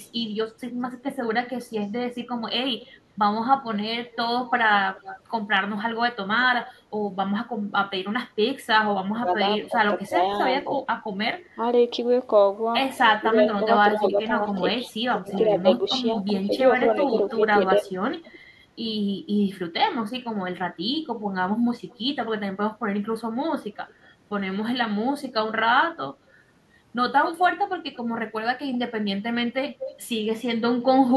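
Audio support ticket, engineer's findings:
Echo leak, 0.03–6.74 s, 9.32–10.65 s, 12.96–18.38 s, 21.9–21.98 s, 23.63–24.07 s, 27.25–31.13 s. Delayed copy of the voice trailing the original by 208 ms early, drifting to 222 ms by the end. Level about 20 dB below the speech at first, dropping to about 30–35 dB down mid-clip, then rising to about 15 dB down in the final stretch. Likely a far-end loudspeaker setup whose echo canceller leaves residual pickup in the return path.

Speech suppressed in double talk, 9.1–11.62 s and 13.2–17.91 s, overlapping echo segments. Talker level dips by up to roughly 15 dB in pieces, totalling under a second in the first span and around a second in the second. Likely the echo canceller misreading simultaneous talk as echo and attenuating the near talker along with it.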